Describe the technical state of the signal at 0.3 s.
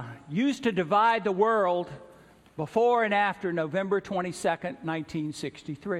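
The audio is intact at 0.3 s, with no fault present at that moment.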